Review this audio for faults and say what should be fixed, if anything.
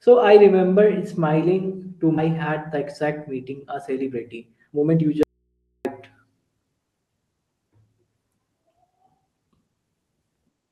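Right after "I remember smiling to", at 2.17 s, there's a skip ahead. Roughly a second of speech got dropped, either in transit or when the jitter buffer overflowed with later audio already queued, so playback jumps straight across with no gap. To prevent it, give the jitter buffer enough headroom that a burst of late packets doesn't force it to discard queued audio.

From 2.75 s to 6.46 s you get jitter buffer speed-up. The speech runs at about 116% speed with the pitch unchanged, so it sounds hurried. The buffer had built up more delay than its target and kept trimming short pitch-period chunks, roughly 0.7 s in total. To prevent it, smooth out packet delivery so delayed packets don't arrive in clumps and overfill the buffer.

Inside that stretch, from 5.23 s to 5.85 s, there's an audio dropout to a faint residue. The speech cuts out abruptly for about 0.62 s, and all that's left is mains hum around 50 dB below the speech level. 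The likely cause is the wanted signal dropping away while the path after the break stayed live, with its open input picking up hum. To prevent it, check and secure the connection or source feeding the input so the signal can't drop out mid-flow. The Opus call coding, band-limited to 12 kHz, can be heard throughout.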